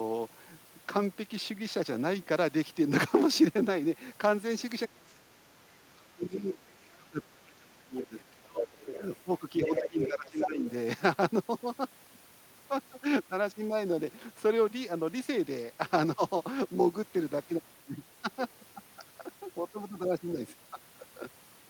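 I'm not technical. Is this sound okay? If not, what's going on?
No. From 4.86 to 8.79 s, and again from 9.64 to 10.66 s, the talker's voice dips or cuts out. This is speech suppressed in double talk, likely because the echo canceller muted both people talking at once.

There is also the other side's voice leaking through. Faint scraps come at 6.85 to 6.89 s, 8.03 to 8.23 s and 8.8 to 9.06 s. From 9.65 to 10.67 s it is nearly as loud as the talker. Likely the echo canceller missed the loudspeaker sound.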